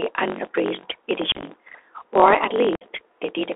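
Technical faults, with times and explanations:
Throughout, block size mismatch (truncated): a steady buzz near 47 Hz runs under the speech, which plays about 1.12 times too fast at roughly normal pitch. One stage writes longer blocks than the next reads, which fits 1024-sample reads, and each block's tail is discarded.
Throughout, Bluetooth CVSD headset codec: the speech is thin and boxed into roughly 300 Hz to 3.5 kHz, with scratchy s sounds and a granular hiss beneath. The one-bit 64 kbit/s delta coder's adapting step cannot keep pace with fast, loud changes.
1.32 to 1.43 s, unconcealed Bluetooth headset packet loss: the speech turns chopped and crackly, with abrupt holes totalling about 68 ms scattered over roughly 105 ms, the longest near 30 ms. Around ten short voice packets were lost and replaced with silence or an idle pattern rather than concealed.
2.76 to 2.84 s, unconcealed Bluetooth headset packet loss: another burst of hard-edged gaps, about 53 ms lost in all, leaving the speech rough and broken for a moment. 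Several lost headset packets were filled with silence or an idle pattern, so the gaps start and stop abruptly.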